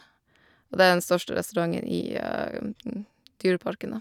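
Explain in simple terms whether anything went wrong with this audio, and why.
From 2.49 to 2.54 s the speech briefly turns quieter, likely because one channel drops out: one stereo side goes silent, halving the mixed-down level.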